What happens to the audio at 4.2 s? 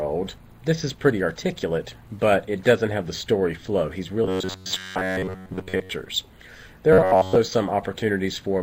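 New audio likely stopped arriving often enough from 4.24 to 5.90 s, so the playback kept repeating its last short buffer to fill the gaps while the real signal was skipped. This is robotic sound from repeated short buffers. Much of the span, roughly two thirds or more, is repeated material. The repetition imposes a fixed buzz near 93.8 Hz, which points to a buffer of about 10.7 ms, and the sound becomes a stiff, metallic drone that only loosely tracks the original.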